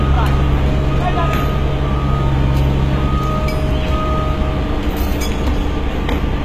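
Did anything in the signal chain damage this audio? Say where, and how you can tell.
Yes, at the codec stage, throughout the clip. The upper range sounds gritty and metallic, bright but not natural, and nothing is present above 14.8 kHz. The cause is likely HE-AAC compression, with damage consistent with a bitrate near 20 kbps. The codec encodes only the lower band and synthesises the treble by copying lower bands upward, so harmonics misalign above the crossover. A spectrogram would show repeated, blocky high-band patterns and a hard ceiling at 14.8 kHz.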